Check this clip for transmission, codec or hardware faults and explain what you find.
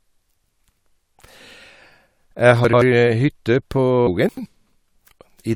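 Two kinds of fault are present. Damaged data in a compressed stream occurs at 0.41 s and 4.06 s. Corrupted bytes make the decoder lose sync. Each spot gives a brief chirp or blip.

Chunks out of order occur at 2.65–2.82 s and 4.29–4.46 s. Each time, an 85 ms chunk plays one chunk late. The speech sounds briefly jumbled.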